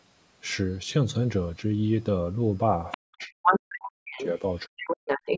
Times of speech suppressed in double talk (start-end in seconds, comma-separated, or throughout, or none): 3.00-4.37, 4.66-4.80